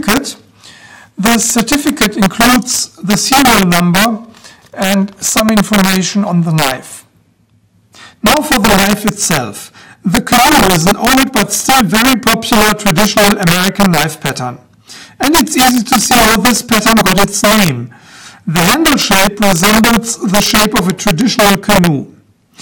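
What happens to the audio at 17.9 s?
At 17.9 s the loud moments break into harsh, violent cracks, far sharper than ordinary clipping, and this integer overflow runs through the whole clip rather than just this point. The signal is pushed about 5 dB past the largest value the integer format can hold, and instead of being limited, each peak over that ceiling wraps around to the opposite sign. A few percent of samples cross over, and every one jumps across the full range, producing those sudden snaps on the loudest parts.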